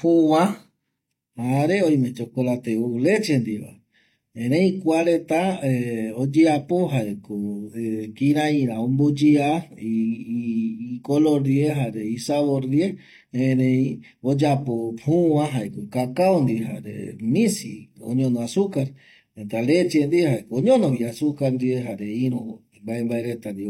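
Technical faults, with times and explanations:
0.99–23.70 s, channel delay (comb filtering): one channel lags the other by roughly 0.4 ms, and the mono sum cancels shared content at evenly spaced frequencies. The first notch sits around 1.5 kHz, leaving the speech hollow and phasey to the end.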